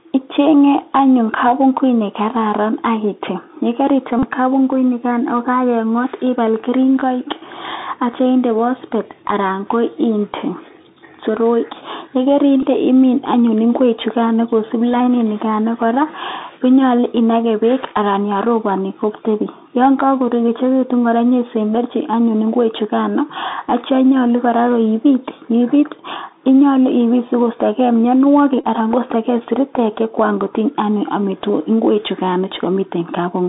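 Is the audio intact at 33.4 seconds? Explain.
No. At 33.4 seconds, as throughout the clip, the speech has passed through a Bluetooth CVSD headset codec, which fits a 64 kbps link. Nothing survives outside roughly 200 Hz to 3.7 kHz, s sounds turn scratchy, and a granular hiss sits under the speech.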